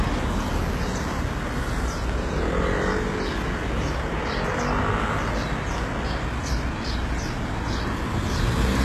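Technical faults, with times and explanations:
Throughout, HE-AAC compression: the treble is missing above 12.3 kHz, and what remains up high sounds gritty and metallic. This is likely heavy low-bitrate coding, consistent with around 16 kbps, where spectral band replication rebuilds the highs from copied lower bands that no longer line up harmonically.
2.10–2.12 s and 4.98–5.00 s, loud pop: each is a single sharp pop about 20 ms long, peaking roughly 5 dB and then 10 dB above the surrounding sound, which continues underneath. These are likely voltage spikes from a switch, static or driver glitch.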